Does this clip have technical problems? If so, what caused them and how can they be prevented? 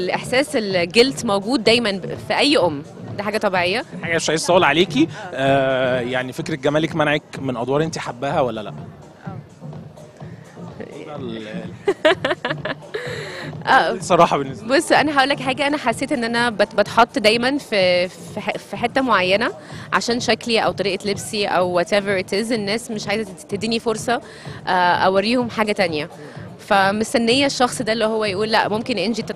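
Yes. There is DAB burbling at 2.11 to 2.19 s and again at 20.71 s. Both are brief patches of noise blips over the audio. Weak reception let bit errors slip past the error correction into the MP2 data. Corrupted samples put short blips of noise into single sub-bands. That fits a handful of damaged frames and a small fraction of a percent of bits arriving wrong. Better reception prevents it, through a stronger signal, a better antenna, or a more robust protection level.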